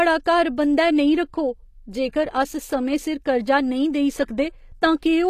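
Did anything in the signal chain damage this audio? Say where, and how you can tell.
Yes. Throughout, the treble sounds gritty and metallic and ends at 14.9 kHz. This is likely HE-AAC compression at the codec stage, which rebuilds the highs by copying lower bands upward.

From 4.23 to 4.28 s, a 47 ms hiss smears an attack. This is pre-echo: the codec spread the loud block's quantisation noise into the quiet moment before it.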